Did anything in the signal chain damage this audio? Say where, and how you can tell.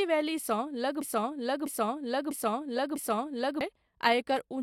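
Yes. From 1.02 s to 3.61 s the speech locks into a broken-record loop: one fragment about 0.65 s long plays four times back to back, each pass identical, before normal speech resumes. The exact repetition points to the playback or streaming buffer stage, most likely a stall in which the player kept re-sending the last block it held. Whatever speech belonged in those 2.6 seconds never arrives and is lost.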